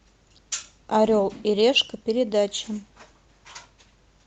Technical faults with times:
none

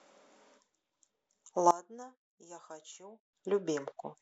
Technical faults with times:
1.71-3.33 one channel inverted

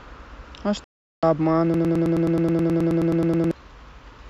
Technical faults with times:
0.84-1.23 digital broadcast dropout
1.74-3.51 broken-record loop

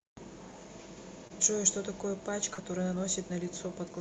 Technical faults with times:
1.27-1.32 short concealed packet loss
2.54-2.60 short concealed packet loss

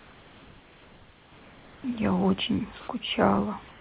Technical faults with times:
0.39-3.38 periodic USB or driver dropouts
2.80-2.88 comfort noise in place of the background
3.68-3.80 comfort noise in place of the background

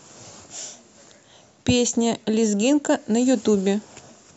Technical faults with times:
none

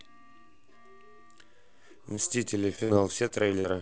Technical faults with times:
2.16-2.19 short concealed packet loss
2.76-2.79 short concealed packet loss
2.84-2.91 burst of packet loss
3.28-3.32 short concealed packet loss
3.60-3.66 short concealed packet loss

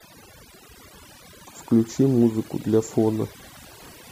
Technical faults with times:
0.00-4.12 overdone noise removal

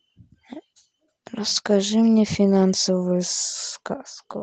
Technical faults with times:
1.49-1.51 overlapping chunks

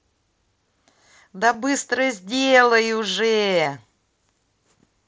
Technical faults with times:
1.53 concealed Bluetooth headset packet loss
3.64 concealed Bluetooth headset packet loss

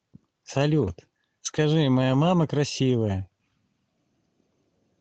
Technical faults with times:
1.49-1.55 lost packet rebuilt from error correction

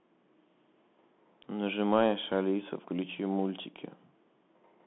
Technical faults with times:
0.00-4.87 Bluetooth CVSD headset codec

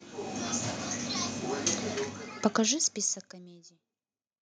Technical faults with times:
none

